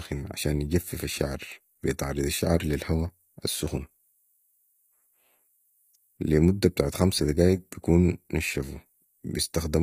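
From start to finish the speech carries HE-AAC compression damage, and it's plainly audible. The likely culprit is a low-rate HE-AAC v2 encode, something in the region of 24 kbps by the sound of it. Only the lower band is really coded; the treble is patched in by copying lower bands upward and shaping them roughly, so the sibilants come out gritty and a bit metallic, with harmonics that don't quite line up. Nothing reaches above 15.5 kHz.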